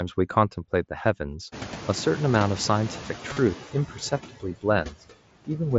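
Noise suppressor artifacts run through the whole clip. The suppressor pulls the steady background down by about 9 dB, frame by frame. It dips in the gaps and swells back under the speech.

At about 1.5 s, the room noise jumps by roughly 25 dB. From 1.52 to 3.56 s the noise suppressor is catching up. Its noise estimate lags, so the new noise comes through louder at first. It sinks over about 2 s, finishing near 6 dB lower.

From 3.33 to 3.37 s there is concealed Bluetooth headset packet loss. About 37.5 ms of audio went missing between headset and phone, which fits five lost frames. The receiver repeats recent waveform to fill it. This gives a short buzzy, held tone with a slight warble as real sound returns.

From 4.29 to 4.65 s, and again from 4.84 to 5.03 s, speech is cut by the noise suppressor. It mistakes parts of the speech for noise. Around a tenth of a second in each span sounds swallowed. 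The first drops by about 18 dB and the second by about 11 dB.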